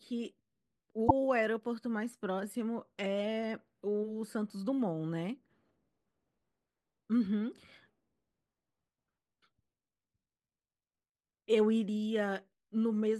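At 1.05 to 1.11 s the speech is broken by damaged data in the compressed stream: corrupted bytes make the decoder misread frames and resynchronise, giving a brief glitch. On a spectrogram it shows as a narrow broadband smear; the waveform shows an abrupt discontinuity.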